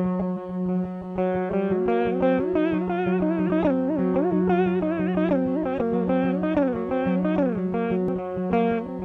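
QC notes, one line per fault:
0.33–0.37 s, 3.44–3.50 s, 5.76–5.82 s, 8.08 s: damaged data in a compressed stream. Four short bursts, the first three each about 40 to 60 ms and the last a single momentary event. At each point the decoder hits corrupted bytes in the compressed stream, misreads or rejects the affected frames and loses sync until it finds the next valid frame header. The garbled reconstruction in that gap is heard as a brief chirp, squawk, click or short hole that breaks into the audio.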